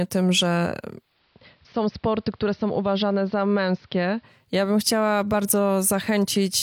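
Right after "tym że", at 0.91 s, the speech dulls over about a third of a second as the treble is cut, the level drops by about 2 dB, and a faint hiss appears well beneath it. At 4.55 s it fades back to full brightness just before "ja bym chciała". This is digital radio blending to analogue: the receiver lost its digital stream, cross-faded to the station's AM broadcast, then returned.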